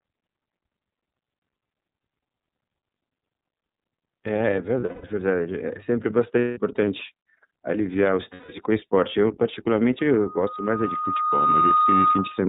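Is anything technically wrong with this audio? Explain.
Yes, three kinds of fault are audible.

iLBC codec, throughout: the speech is band-limited to 4 kHz and sounds slightly rough and synthetic, which fits iLBC's 30 ms frame mode at 13.33 kbps.

Lost iLBC frames, at 4.8 to 5.05 s, 6.39 to 6.6 s, 8.34 to 8.49 s and 11.01 s: the decoder repeats the last pitch cycle with added noise, so each gap sounds like a buzzy held vowel. The gaps last about 210 ms (scattered, longest run around 200 ms), 180 ms, 150 ms and 30 ms. The voice recovers immediately afterwards because each frame decodes on its own.

Loudspeaker feedback squeal, from 9.99 s to the end: the loop gain exceeds one at 1.2 kHz, so a pure tone swells over roughly a second and a half and settles at about 5 dB above the speech.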